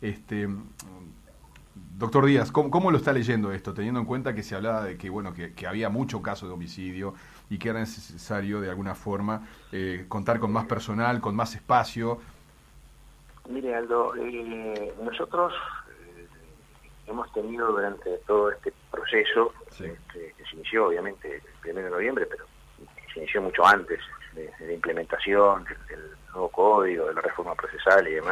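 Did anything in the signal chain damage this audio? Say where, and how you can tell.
No, nothing along the chain from capture to playback audibly damaged this signal, and there is no point where a stage can be heard altering it.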